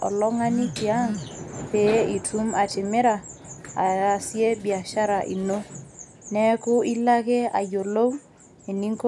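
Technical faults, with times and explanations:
No technical faults can be heard in this speech.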